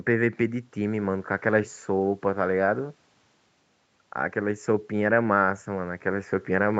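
Nothing's actually wrong with this bit of speech: it's been through a call's microphone processing and codec in the usual way, with the top end stopping at about 8 kHz as you'd expect on that kind of path, and there's no fault to point to.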